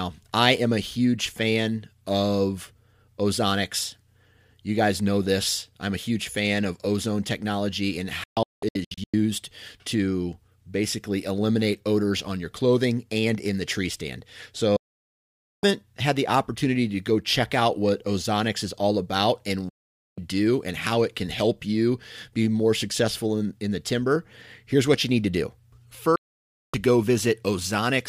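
Speech with four digital broadcast dropouts, at 8.24–9.14 s, 14.76–15.64 s, 19.69–20.18 s and 26.16–26.74 s. The receiver muted on lost or corrupt frames, fading out within 3 ms. The first gap breaks into several short holes, the longest 192 ms. On a waveform or spectrogram, each dropout is a flat, empty block with sharp edges.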